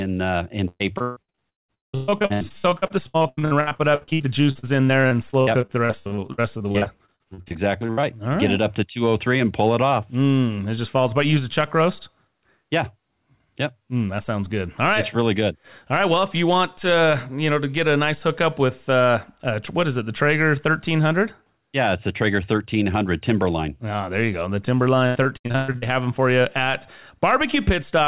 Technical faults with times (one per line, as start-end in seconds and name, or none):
0.38-8.05 repeated packet loss (robotic sound)
25.07-25.84 repeated packet loss (robotic sound)